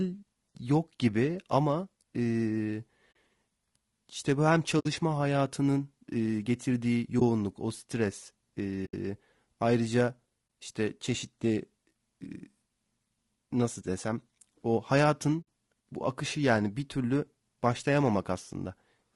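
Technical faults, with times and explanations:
Throughout: low-delay AAC compression. The speech sounds rough and grainy. Noise fills the gaps between the voice's harmonics, and the top band sounds thin and synthetic. This is likely AAC-ELD, the low-delay codec used in video calls, running at a low rate that fits about 32 kbps. Its short frames cannot separate closely spaced pitch harmonics well. At this rate the coder also runs short of bits, so it smears noise across the spectrum and rebuilds the highs crudely.
3.11–3.16 s, 4.79–4.86 s, 7.19–7.22 s, 8.85–8.94 s, 10.61 s, and 15.41–15.46 s: AAC frame loss with muting. The sound briefly drops out six times. Each gap lasts between 20 and 80 ms, and the longest is at 8.85 s. Whole coded frames went missing, and the decoder replaced them with silence. The overlapping transform windows fade the sound down and back up at each edge. That makes soft-edged holes.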